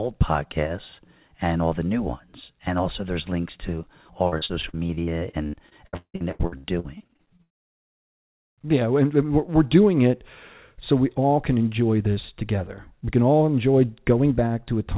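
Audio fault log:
4.28–8.67 s, repeated packet loss (robotic sound): dozens of dropouts, longest 170 ms, each filled by stretching the preceding sound, leaving roughly a third choppy.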